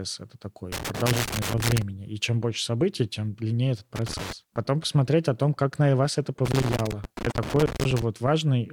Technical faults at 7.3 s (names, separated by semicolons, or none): loose connector crackle; damaged data in a compressed stream